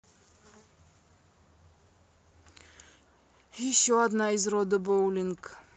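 At 4.83 to 4.89 s, a lost packet was rebuilt from error correction. About 40 ms of the speech, which fits two 20 ms packets, never arrived, and the decoder filled the hole with the low-bitrate copies carried in the following packets. There is no gap or dropout, just a brief patch that sounds rougher and noisier than the surrounding Opus audio, which already tops out near 8 kHz. Concealment guesswork would instead smear or buzz.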